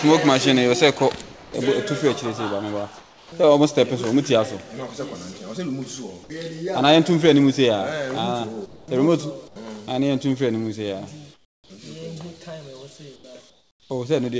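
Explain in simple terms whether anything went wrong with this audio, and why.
Comfort noise in place of the background appears in the quiet gaps at 1.22–1.54, 2.98–3.32, 8.66–8.88, 9.48–9.56, 11.34–11.70, 13.16–13.24 and 13.50–13.90 s. In each, the real background gives way to a smooth, featureless noise, slightly quieter and clearly softer around 11.3 and 13.5 s. The likely cause is the sending side pausing transmission during silence, leaving the receiving end to fill the gap with a synthetic imitation of the room until sound resumes.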